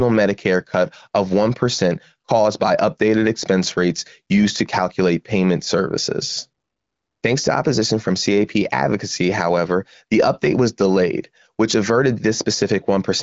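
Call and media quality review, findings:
Call and media quality review findings: no faults heard in the speech, which is carried over the AMR wideband (HD Voice) codec at about 15.85 kbit/s, with nothing above roughly 7.4 kHz.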